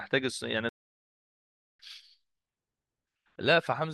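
At 0.69 s the speech cuts off abruptly and the output stays silent until 1.79 s, a gap of about 1.1 s before sound resumes. This is a playback stall, likely caused by the player running short of buffered data or its output thread being blocked, so nothing reached the output until it recovered. On a waveform the trace drops to a flat line across that span. A spectrogram shows a clean vertical band of empty energy with hard edges on both sides.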